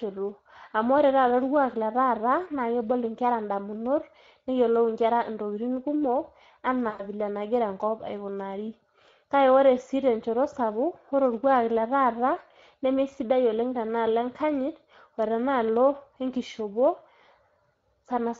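Across the whole clip the speech has a hoarse, grainy edge, with plainly audible roughness and a thin, noisy quality in the highs. This is the Speex codec at work. The CELP coder has too few bits to model the excitation accurately, so the residual comes out as hiss and buzz. The amount of damage fits a setting around 16.8 kbps, where the upper band is only a shaped noise fill.

From 6.89 to 7.06 s the speech is stretched out and weakens and dies away, and the voice stays weak or distorted for a moment afterward. This is VoIP packet loss concealed by the speech codec. About 100 ms of audio went missing, which fits five 20 ms frames. The decoder filled the gap by repeating its last pitch and filter with falling gain, and because each frame depends on the one before, recovery lags once packets resume.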